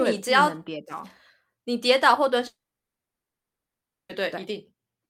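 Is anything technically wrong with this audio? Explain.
Yes. From 2.47 to 4.12 s there is a long network dropout: the stream was likely interrupted, so about 1.6 s of speech never arrived. The receiver briefly stretches the last sound into a fading buzz, then about 1.5 s of silence passes before speech resumes with that section gone.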